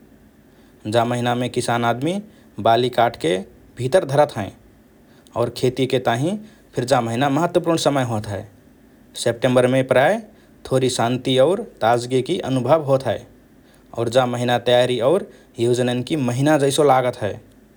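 No technical faults can be heard anywhere in this speech recording.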